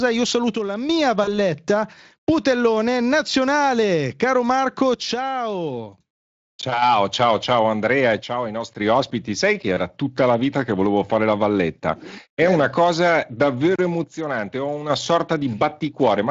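From 0.55 to 0.89 s the speech drops abruptly by about 6 dB and returns just as suddenly. This is likely one channel dropping out before a mono sum. Unlike a fade or gain ride, the step is instant and flat.

At 1.23 to 1.30 s, VoIP packet loss concealed by the speech codec stretches the voice into a fading buzzy tone or coloured noise. The gap of about 40 ms fits two lost 20 ms frames, and the voice stays weak briefly after recovery, not cleanly silent.

The same 6 dB channel-dropout step recurs from 4.94 to 6.82 s, ending just before "ciao ciao", then from 8.20 to 8.80 s, and from 14.04 to 14.90 s right after "eh una cosa davvero".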